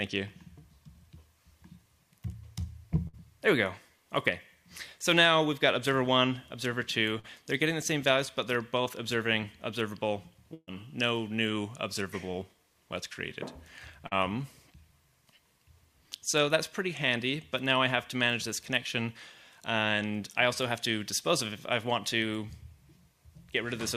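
Brief held buzzes or fading hiss cut in at 3.07–3.15 s, 7.19–7.26 s and 10.54–10.69 s, the last trailing into about 40 ms of silence. These are bursts of packet loss: consecutive packets were lost or arrived too late, so the receiver stretched and faded the last sound, and about 60, 40 and 140 ms of audio are skipped. At 8.84–8.88 s and 14.07–14.13 s, short smears mark short concealed packet loss, where 20–40 ms went missing and was patched from the preceding sound.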